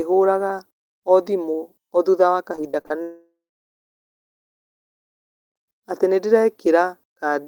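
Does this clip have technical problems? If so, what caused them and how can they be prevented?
Yes. From 2.55 to 2.92 s there is repeated packet loss, heard as choppy, robotic sound: five short holes, the longest 34 ms, each patched by stretching the preceding sound, so about a third of that span is filler. Unlike a dropout, the audio keeps returning between gaps. A larger jitter buffer with forward error correction would prevent it.

From 3.02 to 5.58 s the sound briefly buzzes on, then falls to near silence for about 2.2 s before resuming with roughly 2.5 s missing. This single long blank, rather than rapid stutter, marks a long network dropout, likely from the connection stalling. A more stable link with redundant transmission would prevent it.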